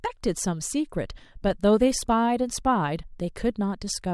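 No technical faults can be heard anywhere in the speech.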